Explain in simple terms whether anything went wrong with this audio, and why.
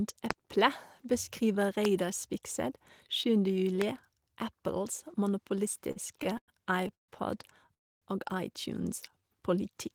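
Three loud pops, likely from a voltage glitch such as a plug, switch or static, jump out sharply over the speech at 0.31–0.33, 1.85–1.87 and 3.82–3.84 s.

Repeated stalls (stutter) from 5.91 to 6.50 s: network packets kept arriving late, so playback stalled five times, each pause up to 100 ms. The speech drags and stutters but loses nothing.

Two call audio freezes, likely from packets held up on the network, insert near-silent gaps of about 0.14 s at 6.95 s and about 0.28 s at 7.74 s. The speech then resumes where it stopped.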